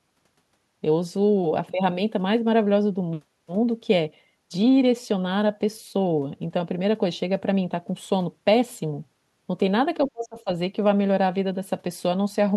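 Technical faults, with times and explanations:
10.08–10.5 s, speech suppressed in double talk: the speech level plunges by roughly 35 dB, nearly cutting out for about 0.4 s. This is likely an echo canceller unable to separate the near talker from simultaneous far-end sound, so it suppressed both together.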